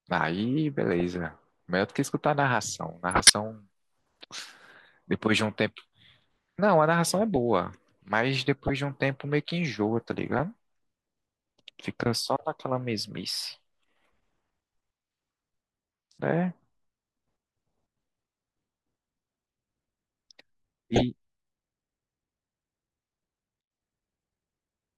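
Speech clip with five short bursts of corrupt frame decoded: a tiny blip at 1.0 s, then 3.11 to 3.30 s, 8.64 to 8.70 s, 10.32 to 10.39 s and 20.94 to 21.02 s. Each is a burst of junk energy at the wrong frequencies, where damaged compressed frames got played anyway. The 3.1 s one is the loudest, peaking around -5 dBFS and lasting long enough to suggest a handful of bad frames in a row.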